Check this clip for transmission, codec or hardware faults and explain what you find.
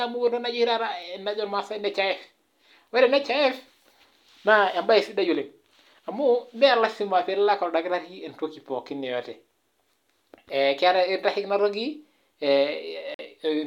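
One fault stands out, near the end of the speech. From 13.14 to 13.21 s the sound cuts to silence. This is a Bluetooth dropout. It is likely caused by audio packets arriving too late for the headphones and being discarded. The gap fits two lost packets, about 46 ms of audio. When sound returns, it has moved on in time rather than picking up where it stopped.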